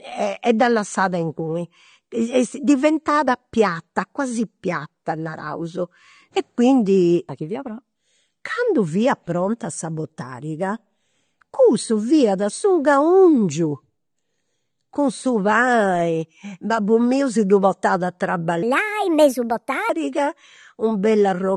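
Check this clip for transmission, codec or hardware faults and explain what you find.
Two faults are audible: codec damage across the whole clip and one short passage running fast.

AAC compression damage is present throughout. The speech sounds dull and smeared, with fizzy, warbling sibilants. This is likely from low-bitrate AAC-LC, which fits roughly 32 kbps. A spectrogram shows a lowered cut-off and patchy holes in the upper bands.

A section at the wrong speed runs from 18.63 to 19.89 s. It plays 1.34 times too fast, raising the pitch by about five semitones so the speech turns high and hurried. This is likely from a clock mismatch during playback or editing. On a spectrogram the harmonics jump upward and spread apart for that stretch, and the waveform's syllable envelopes are visibly compressed.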